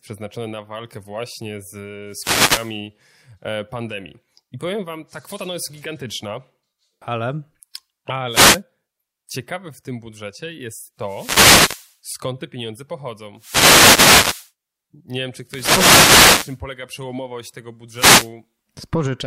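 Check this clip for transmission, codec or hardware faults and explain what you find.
The speech is hit by wireless microphone noise six times: 2.07–2.80 s after "na walkę właśnie z", 8.29–8.61 s, 10.99–11.98 s between "w tym budżecie jest" and "skąd te pieniądze", 13.36–14.52 s, 15.46–16.60 s, and 17.93–18.31 s after "przełomowość tego". The FM radio link fades as reflections cancel, so receiver noise rises as bursts of swishing static.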